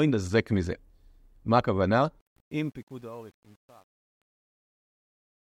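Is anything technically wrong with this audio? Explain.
Yes. From 2.20 s to 5.46 s the speech carries truncation distortion on a fade, worst from 2.72 s onward. The fade-out stage drops bits without dither, consistent with about 9-bit resolution, so the quiet waveform collapses into square steps, leaving the quiet end gritty. Unlike a noise gate's clean on-off chopping, the grit thickens as the level falls.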